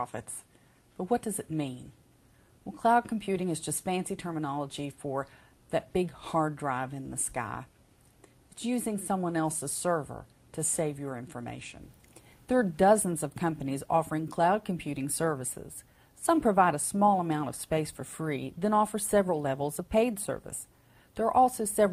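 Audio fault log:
No faults detected.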